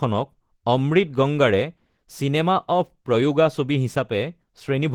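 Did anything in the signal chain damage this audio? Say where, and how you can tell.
Yes, at the codec stage, likely Opus compression throughout. The speech is hoarse and grainy, which fits hybrid mode near 16 kbps. A spectrogram shows noisy, smeared bands reaching 20.2 kHz.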